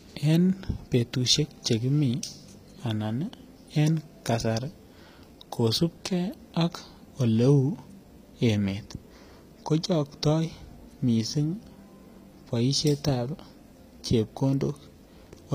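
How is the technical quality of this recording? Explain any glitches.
Plainly audible coding damage runs through the whole speech recording. HE-AAC compression is present throughout: the treble is likely rebuilt by copying lower bands upward, so s sounds turn gritty and metallic, with nothing above 15.4 kHz.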